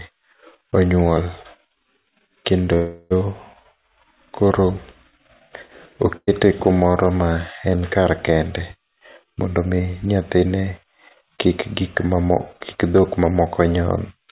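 At 2.74 s the sound suddenly stretches into a held, fading buzz or hiss for about 0.37 s before picking up again at 3.13 s exactly where it left off, with nothing skipped. That's a call audio freeze, likely packets stalling in transit and draining the jitter buffer.

Then from 6.17 to 6.29 s, just before "kumoro ma en kar", there's a burst of packet loss. The last sound gets smeared out and turned down, drops to silence for about 30 ms, and resumes with roughly 100 ms of audio simply gone.

Right after "ma en kar kende", from 8.86 to 11.75 s, a jitter buffer speed-up kicks in. The buffer was holding too much, so tiny pitch-period slices get trimmed over and over. It plays at about 108% speed with the same pitch and sounds a bit rushed, shedding about a fifth of a second overall.

Throughout, the band tops out around 4 kHz, which fits a narrowband G.711-type call codec.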